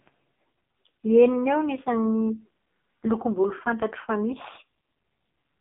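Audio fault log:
throughout, AMR narrowband mobile codec: the speech sounds thin, buzzy and synthetic, held to a 250 Hz to 3.5 kHz band with nothing above 3.6 kHz. The voice is rebuilt from a vocal-tract model and sparse pulses; damage this heavy fits a rate near 5.15 kbps.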